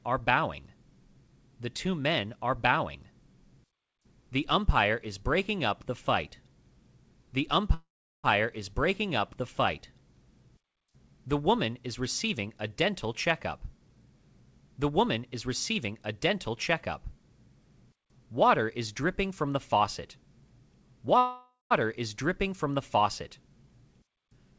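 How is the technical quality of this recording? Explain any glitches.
The recording has two kinds of glitch, both typical of audio sent over a call link whose band stops at 8 kHz, which fits a wideband codec such as G.722 at 64 kbps.

Call audio freezes at 7.74–8.26 s and 21.18–21.73 s. These were likely caused by late packets draining the jitter buffer. The receiver stretched the last sound into a fading buzz, then near silence (about 0.38 s and 0.17 s of it). When the audio resumes, nothing is lost, but each freeze inserts roughly half a second of delay.

Jitter buffer speed-ups occur at 14.80–17.05 s (about 4% faster) and 20.96–21.17 s (about 17% faster). With surplus audio queued, the buffer trimmed many tiny pitch-period slices, about 100 ms and 40 ms in total, so the sound runs quicker at an unchanged pitch, and the second one sounds rushed.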